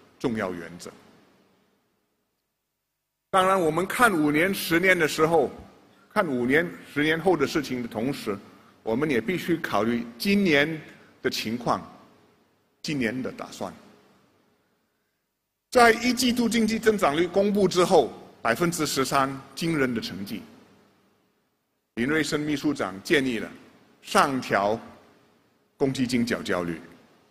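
No technical faults can be heard anywhere in the recording, and the signal holds steady throughout with nothing that calls for attention.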